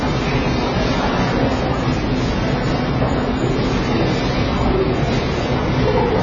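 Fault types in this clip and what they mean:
AAC compression: The sound runs dull from start to finish. Nothing is heard above 7 kHz. The top octave is simply gone. Detail is smeared, and the damage is heavy throughout. This is likely the work of AAC-LC at a very low bitrate, one that fits about 16 kbps. At such a rate the encoder keeps too few bits per frame. It drops the high band and codes the rest coarsely, which blurs the texture.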